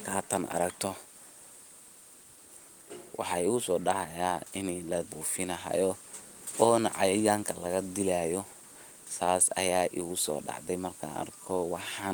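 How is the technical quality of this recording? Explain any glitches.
The speech recording has no technical glitches anywhere in it.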